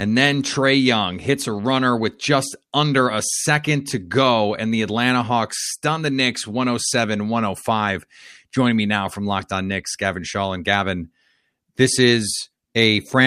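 Speech recording with no audible technical faults anywhere in the clip.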